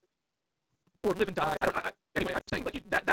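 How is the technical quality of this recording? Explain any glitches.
The recording has two clear problems: a steady buzz with sped-up speech throughout, and two short dropouts where the speech smears and fades.

Block size mismatch (truncated), throughout: a buzz at 188 Hz runs under everything, and the speech plays 1.88 times too fast while keeping roughly its normal pitch. One stage hands over longer blocks than the next stage takes, so the tail of every block is discarded. The joins repeat at the block rate, which produces the buzz, and the missing material makes the speech hurry. The sizes point to each block being cut to 256 samples.

Lost AMR speech frames, at 1.57 to 1.63 s and 2.39 to 2.54 s: at the first point, 80 ms of speech drops to near silence. At the second, about 180 ms is missing, scattered over roughly 240 ms, with a longest gap of 120 ms. There the sound warbles and sinks toward silence, then comes back weak and rough. 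Frames damaged in transmission failed their checks, so the decoder kept repeating the last good pitch and vocal tract settings at falling gain. The AMR wideband (HD Voice) codec at 12.65 kbit/s adds only light coloration of its own.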